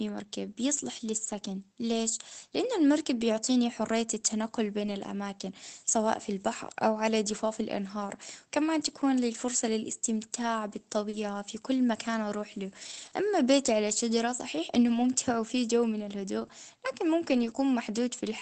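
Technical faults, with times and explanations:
3.19 to 3.21 s and 4.79 to 4.89 s, lost packet rebuilt from error correction: the audio never drops out, but it briefly turns grainier and noisier, for 20 ms and then for 60 ms. The second event fits about three lost packets in a row. Each missing stretch was replaced by a low-bitrate copy carried in the following packet by Opus in-band forward error correction, so the decoder filled the hole with a coarser version instead of silence.
11.09 to 17.55 s, scattered short gaps: about three brief hiccups are spread across this span, heard as tiny ticks or smears, the longest around 40 ms. Together they cover only about 1 percent of the stretch. Packets arrived late or not at all, and the receiver hid each small hole by extending the preceding sound through it. Clarity is kept, but the seams can be heard as momentary smudges in the 8 kHz-wide Opus call audio.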